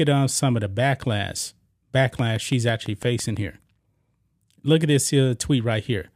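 From 2.19 to 3.38 s, a train of clicks runs over the speech. About seven sharp ticks arrive at a steady six per second, peaking about 5 dB above the voice. Each click has the same shape. Nearby equipment interference or a faulty connection or power supply is the likely cause.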